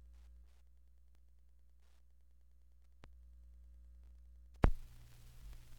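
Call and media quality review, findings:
Steady faint ticking, about ten per second, present for the whole clip and roughly 40 dB below the signal. Wi-Fi interference: a nearby radio's beacon, repeating every 102.4 ms, couples into the analogue audio path and is rectified into audible clicks. Probable component: unshielded input or preamp stage.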